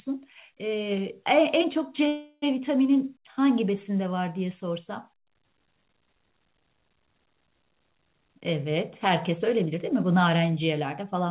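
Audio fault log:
2.08–2.44 s call audio freeze: packets were likely held up and the buffer ran dry, so the last sound stretches for 341 ms, briefly falls silent, then resumes intact but later.
9.29–11.16 s jitter buffer speed-up: the receiver trimmed tiny pitch-period slices to shed excess delay, about a tenth of a second in all, so the audio runs 5% faster at unchanged pitch.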